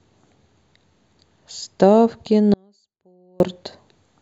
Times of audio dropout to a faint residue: 2.54-3.40

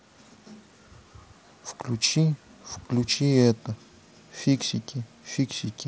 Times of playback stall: none

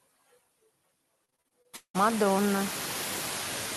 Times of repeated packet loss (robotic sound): 1.25-1.96

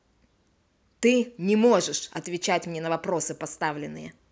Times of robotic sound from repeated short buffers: none

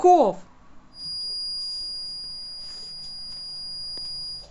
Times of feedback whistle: 0.90-4.50

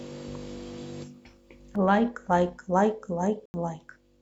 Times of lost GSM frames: none

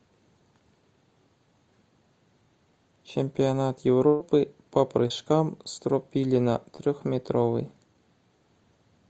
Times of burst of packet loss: 4.07-4.22

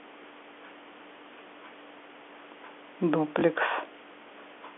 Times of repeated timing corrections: none

